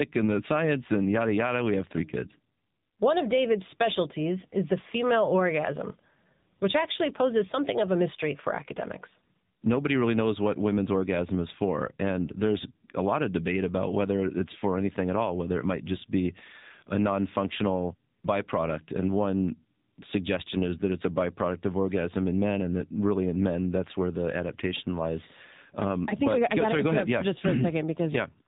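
A narrowband AMR-NB mobile codec runs throughout, which fits a 7.4 kbps mode. The speech loses everything above 3.8 kHz and comes out muffled, buzzy and plainly synthetic.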